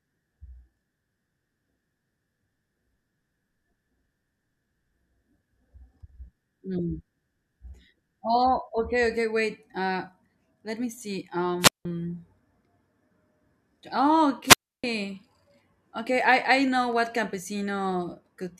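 Just after "let me see", a wireless microphone squelch dropout runs from 11.6 to 11.85 s: the FM signal fades, hiss rises, and the receiver mutes for about 178 ms before speech returns. A second dropout at 14.45–14.84 s mutes for about 307 ms.

From 16.68 to 18.43 s, following "I I", periodic USB or driver dropouts produce regular ticks every 0.25 s, about seven in all. Each time a blocked bus or driver skips a tiny fraction of a millisecond of audio, leaving a click in the speech.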